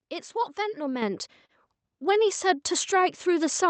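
At 1.02 s the speech and the background noise behind it jump louder together, by about 7 dB, in a single step. This is the microphone volume stepped up: the call software judged the input too quiet and raised the device's gain at once, mid-stream.

From 1.46 to 1.52 s a sound hangs on too long, with a faint buzzy quality, before the speech picks up where it left off with nothing lost. This is a short stall from a late packet. The jitter buffer ran dry, so the receiver stretched the last audio for about 31 ms until the packet arrived, leaving the rest of the clip that much later.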